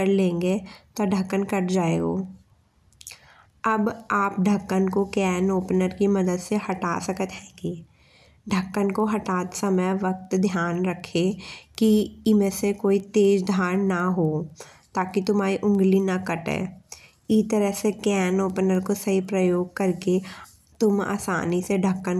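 Throughout the speech, the resampler restarted on every block: the 48 kHz to 24 kHz conversion ran on each 250 ms block separately, leaving a small error at every block edge. The result is a steady tick four times a second, present whenever the voice sounds.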